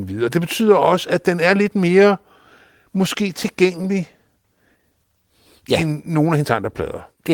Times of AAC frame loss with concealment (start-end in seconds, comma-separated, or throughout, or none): none